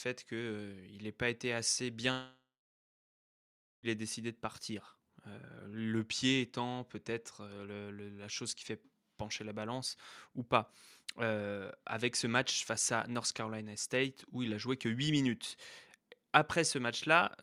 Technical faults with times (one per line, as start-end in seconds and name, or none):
2.11-3.86 long network dropout